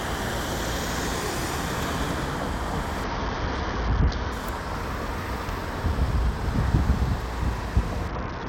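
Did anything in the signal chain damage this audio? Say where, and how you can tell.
Yes. The damage happens at the codec stage, on the Bluetooth link. A Bluetooth SBC bit pool drop occurs from 3.04 to 4.32 s and again from 8.08 s to the end. In both spans the treble goes dull and a gritty noise rises; the first clears at 4.32 s. The encoder starved itself of bits to keep the stream alive. The top sub-bands lost their share, and the rest were coarsely quantised. The sound fits a bit pool falling from 28 to 7, near 66 kbps.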